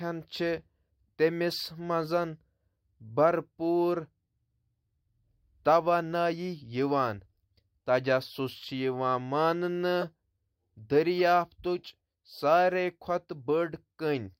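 At 10.01 to 10.04 s and again at 11.19 s you get a corrupt frame decoded: damaged compressed frames played anyway, spraying misplaced energy into short chirpy blips.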